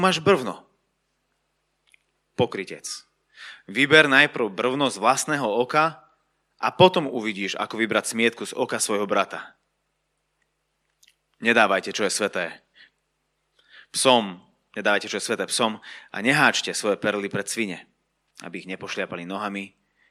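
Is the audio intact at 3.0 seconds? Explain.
Yes, the audio at 3.0 seconds is intact, with no dropout, click, distortion or other fault to be heard at that moment.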